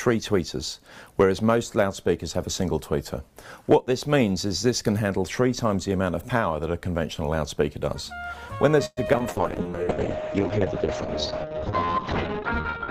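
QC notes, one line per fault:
8.85–9.26 s, repeated packet loss (robotic sound): four gaps in quick succession, the longest 116 ms, each patched by extending the previous sound, leaving choppy fragments.
9.28–12.90 s, call bitrate drop: the encoder fell from 48 to 7 kbps and cut bandwidth from 20 kHz to 6 kHz, so the sound turns muffled and rough to the end.
9.62–9.95 s, jitter buffer slow-down: the receiver repeated short segments to rebuild its reserve, adding 47 ms and playing at 89% speed, so sounds drag without any pitch change.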